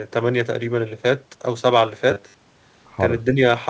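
Robotic sound from repeated short buffers runs from 2.11 to 2.43 s in this speech recording, which carries the band limit of a G.722 call path with nothing above 8 kHz. Here the voice turns into a rigid, metallic buzz at 100 Hz, most likely because audio arrived too late and most of that stretch was filled by looping a segment of about 10 ms. Speech suppressed in double talk follows at 3.34 to 3.40 s: the level dips by around 5 dB for about 70 ms, likely an echo canceller turning the talker down while the far side also spoke.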